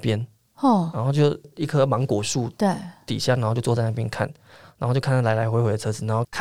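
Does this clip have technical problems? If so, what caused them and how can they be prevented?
No, nothing in this speech clip points to a technical fault, so there is no cause to trace and nothing to prevent.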